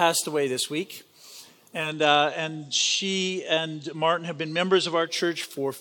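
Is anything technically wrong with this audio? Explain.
Yes. From 1.76 s to 5.18 s the sound drops about 2 dB and gains a faint hiss well below the signal. This is digital radio blending to analogue: the receiver lost the digital stream and cross-faded over 170 ms to the FM broadcast, then back.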